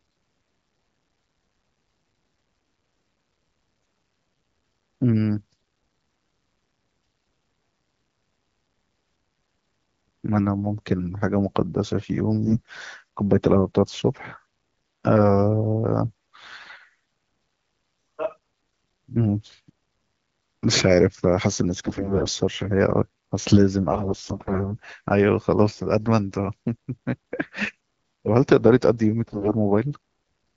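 AMR bit errors roughen the speech five times, at 12.45–12.79 s, 16.06–16.74 s, 21.84–22.34 s, 23.91–24.72 s and 29.27–29.53 s. The weakly protected bits in each frame arrive corrupted, so the excitation pulses and fine pitch, gain and spectral values decode wrongly. The speech turns hoarse and gargly but keeps its rough pitch and level, without the gaps or smeared repeats of lost packets. The surrounding wideband coding sounds clean and points to around 12.65 kbit/s.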